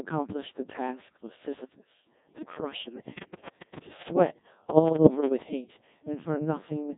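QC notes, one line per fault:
Throughout: Codec 2 vocoder. The speech has been passed through a low-rate parametric vocoder at around 1.6 kbit/s. The decoder rebuilds each frame from pitch, voicing, energy and a coarse spectral envelope using summed sine waves, so the original waveform is gone and the result sounds robotic and buzzy. The codec damage is heavy, the line band sits at 150 Hz to 3.7 kHz, and nothing is present above 3.8 kHz.
3.18 to 5.28 s: train of clicks. Roughly twenty sharp, similar-shaped pulses ride over the speech at about 8.6 per second, with uneven spacing, and they peak around 15 dB above the signal. They sound like ticking or popping laid on top of the audio rather than part of it. The likely cause is interference from nearby equipment or a faulty connection or power supply injecting repeated pulses into the chain for about two seconds.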